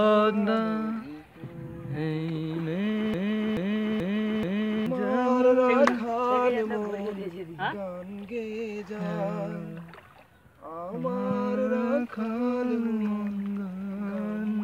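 From 3.14 s to 4.86 s the sound sticks: a fragment of about 0.43 s plays four times in a row, each pass identical and butted straight against the next, before the audio resumes. This is a broken-record loop. The repetition likely comes from the player, encoder or stream stalling and re-sending the last fragment it held. Whatever should have played during those 1.7 seconds is gone.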